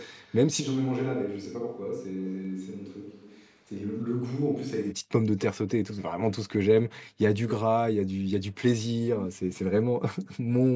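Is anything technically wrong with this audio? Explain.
Yes, there are two problems.

First, echo leak, in three spots. From 0.0 to 0.35 s there's a faint repeat trailing the speech by about 306 ms. From 2.19 to 3.52 s a longer stretch comes back about 271 ms late. At 5.24 to 5.44 s there's a shorter burst, also 271 ms behind. The first two sit about 20 dB under the speech, and the last is louder, about 10 dB down. It's likely a far-end loudspeaker whose echo canceller let some of its own mic pickup through and sent it back.

Second, a switch to a distant microphone from 0.62 to 4.91 s. The sound suddenly goes roomy and hollow, loses some low end, drops about 5 dB, and picks up more room noise, sitting roughly 35 dB below the speech. When it ends it snaps straight back. The likely cause is the close mic's signal dropping out, so a farther mic such as a camera's took over.

The top end stops at 8 kHz, which is what you'd expect from the call's mic processing.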